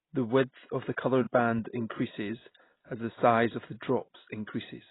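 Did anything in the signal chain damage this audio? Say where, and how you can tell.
Yes. The damage is at the codec stage and runs through the whole speech clip, most likely from AAC compression (AAC-LC) at a very low rate. Nothing survives above 3.9 kHz, and sibilants and sustained vowels sound smeared and warbly, which fits about 16 kbps. A plain low-pass or telephone band-limit would cut the top cleanly but leave what remains steady. Here the heavy quantisation of each frame's spectrum adds the fizzy, shifting texture.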